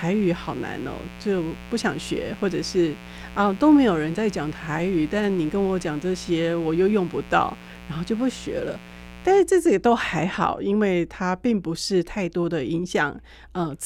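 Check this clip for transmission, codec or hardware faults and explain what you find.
There's one fault: mains buzz over the speech from 0 to 9.41 s. Switching spikes twice per 60 Hz cycle stack harmonics into kilohertz, giving a raspy buzz roughly 20 dB under the voice.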